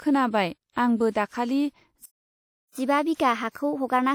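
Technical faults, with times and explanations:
Throughout: WMA compression, likely from a low-bitrate transform codec, which fits about 48 kbps. Quantisation noise is smeared across long blocks, so the speech rings and sounds washy with hiss that breathes with the signal, and plainly audible damage. Nothing remains above 17.8 kHz.
Throughout: sample clock jitter. The converter's sampling instants wander by roughly 2 microseconds, and the timing error scales with waveform slope. This gives a hiss or roughness around 40 dB below the signal that rises on loud, bright passages and disappears in silence.
2.06 to 2.75 s: playback stall, likely the player running out of data or its thread being blocked. Output goes silent for about 0.70 s in mid-flow, then resumes once buffering or scheduling recovers, with the break cutting the speech off abruptly.
2.75 s to end: catch-up at higher speed. After the stall the player drains its backlog by resampling at 1.15 times normal speed. 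Tempo and pitch rise together, pitch by roughly two semitones, and stay raised through the end of the clip.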